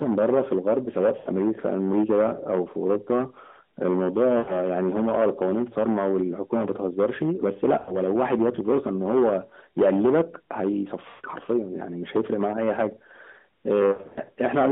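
Hard clipping runs through the whole clip. The level was pushed about 12 dB past what the chain could pass, so something like 7 percent of samples get their peaks sliced flat. That adds a harsh, fuzzy edge to every loud syllable, even within the narrow mobile band the AMR narrowband codec leaves.

Lost AMR speech frames come next, at 1.18 to 1.29 s, 4.38 to 4.59 s, 7.78 to 7.97 s and 11.10 to 11.27 s. The decoder fills each gap by stretching out the last good sound and fading it, so you hear a smeared, sagging dip lasting 80 to 140 ms before the speech comes back a bit rough. The last one, 13.92 to 14.19 s, is patchier. About 180 ms of losses scatter across roughly a quarter second, with the longest unbroken stretch 80 ms, so it stutters rather than fading to silence.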